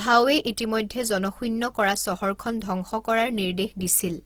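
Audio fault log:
Throughout, Opus compression: the speech sounds plainly rough and grainy rather than swirly, likely from an Opus encoder in music mode keeping each band's energy but padding starved bands with folded copies or noise. Content still reaches about 20.3 kHz, and the damage fits a 16 kbps rate.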